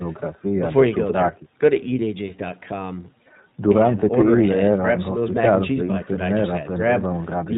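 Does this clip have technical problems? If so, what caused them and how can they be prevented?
Yes. The whole clip has iLBC codec damage, plainly audible as a slightly rough, synthetic quality. It comes from the codec coding each 20 ms frame on its own, at a rate that fits the 15.2 kbps mode, and nothing above 4 kHz survives. On a spectrogram, energy stops at a flat ceiling at 4 kHz. Using a wideband codec such as Opus instead would prevent it.

From 3.22 to 3.28 s there are lost iLBC frames, a 40 ms gap that fits two dropped 20 ms frames. The decoder filled it by repeating the last pitch cycle mixed with noise, so it sounds like a brief held, buzzy vowel. On a waveform this appears as similar repeating cycles, and on a spectrogram as unchanging, slightly smeared harmonics. The voice is clean again immediately afterwards. Adding redundancy or forward error correction, or fixing the network loss, would prevent it.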